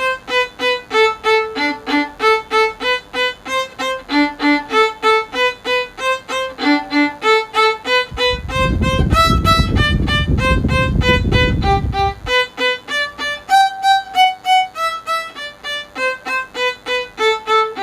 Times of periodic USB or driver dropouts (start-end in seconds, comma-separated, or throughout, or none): none